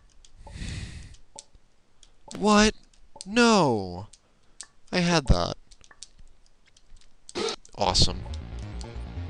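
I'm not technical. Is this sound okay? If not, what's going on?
No. There are two loud pops, each a quick double thump, at 2.35–2.51 s and 5.13–5.34 s, likely electrical glitches, while the sound continues underneath.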